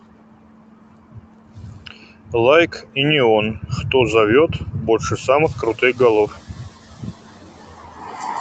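A speech recording in which the noise suppressor repeatedly mistakes parts of the speech for noise, which is speech cut by the noise suppressor. Syllables and word endings are pulled down by up to about 19 dB, so they sound swallowed, at 0.00–2.34 s, 2.67–2.97 s, 3.53–3.78 s, 4.48–5.28 s, 5.51–6.00 s and 6.27 s to the end. When the room noise jumps by about 20 dB near 5.5 s, the noise suppressor catching up lags for 0.92 s, from 5.43 to 6.35 s. That noise first comes through under-reduced, then sinks by about 7 dB as the estimate adapts.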